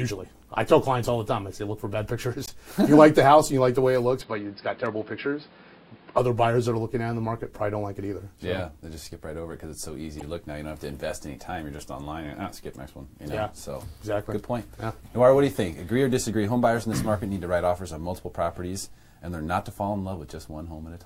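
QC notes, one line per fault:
2.46–2.49 s and 10.19–10.22 s, damaged data in a compressed stream: two short bursts of garbled sound, each about 30 ms long, heard as a brief chirp or squawk. At each point the decoder met corrupted bytes, could not read the frames properly, lost sync and played misread data until it locked onto the next valid frame header. That misread data is why each blip sounds foreign to the surrounding audio.
4.21–6.18 s, input switched to a poorer device: for about two seconds the sound turns dull and boxy, with nothing above 5.2 kHz, then opens up again. The likely cause is the recording moving to a narrower-band input for this stretch. There is no gap at the changeover and the level stays roughly the same, so the change is in tone. A new noise floor, about 30 dB below the signal, comes in with that device.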